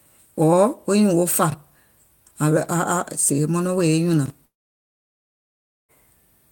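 A speech recording with two brief jumbled moments and one long gap. At 1.50 to 1.54 s and again at 4.26 to 4.30 s, the sound briefly garbles. These are chunks out of order: a 20 ms piece of audio plays one chunk later than it should, swapping places with its neighbour. Nothing is missing, but the wrong order creates three hard edits in about 40 ms, heard as a stumble. From 4.45 s, the last sound smears into a short fading buzz and then gives way to silence lasting about 1.4 s, until the audio resumes at 5.92 s. The speech picks up further along, and about 1.44 s of material is simply gone. This is likely a long network dropout: no audio reached the receiver, which stretched the final sound briefly before falling silent, so the lost section was never played.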